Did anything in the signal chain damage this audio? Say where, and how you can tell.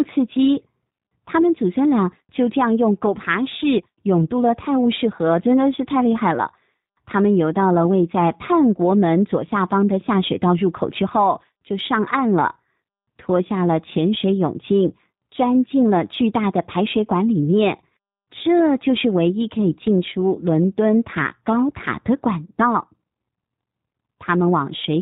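Yes. The damage happens at the codec stage and runs through the whole speech clip: the audio has been through the G.729 codec, and the damage is plainly audible. Nothing survives above 4 kHz, so sibilants go dull, and the speech has a slightly rough, synthetic edge. That fits an 8 kbit/s G.729-family coder, which rebuilds each 10 ms frame from a vocal-tract filter, a pitch predictor and a few pulses. On a spectrogram, energy stops at a flat 4 kHz ceiling, and the harmonics look smeared.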